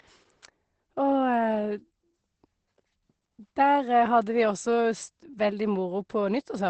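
Throughout the speech, Opus voice compression is working in its SILK linear-prediction mode with a coarsely coded excitation, which fits a bitrate around 12 kbps. Nothing above 8.5 kHz survives, so the speech sounds plainly muffled, hoarse and slightly robotic.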